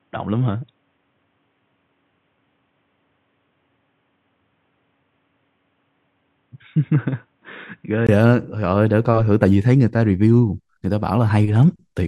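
The input was likely running on a poorer device from 0 to 8.09 s. The speech there is dull and boxy with nothing above 3.8 kHz, a few decibels quieter, over faint noise about 45 dB down. A 20 ms silence marks the switch back at 8.09 s.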